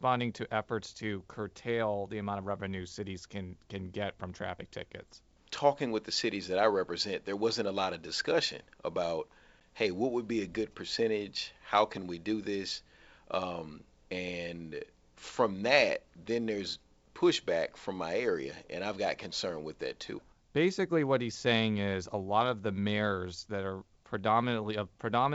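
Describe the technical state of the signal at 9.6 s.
At 9.60 s there is packet loss on an ADPCM call. About 10 ms of the speech, roughly one packet, drops out and is filled with silence, leaving a short hard-edged gap. The decoder's adaptive predictor and step size lose track of the sender's during that gap. When the speech resumes, it comes back slightly distorted. It settles within some tens of milliseconds, over the clear wideband G.722 coding.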